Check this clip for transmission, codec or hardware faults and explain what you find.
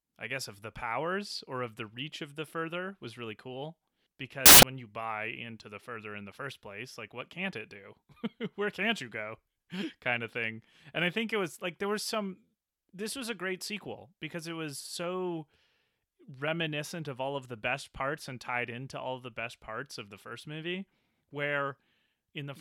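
There's one clear fault in this speech clip. From 4.46 to 4.63 s you get samples built from the wrong bytes: the reader misassembled each sample, so the jittery low-order bits ended up as the big part of the value. For about 0.17 s that comes out as a burst of loud, harsh broadband noise.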